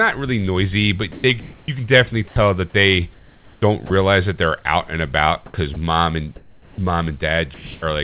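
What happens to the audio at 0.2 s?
Nothing goes wrong at 0.2 s; the audio is intact there, with the call path's narrowband coding and the faint room noise present as expected.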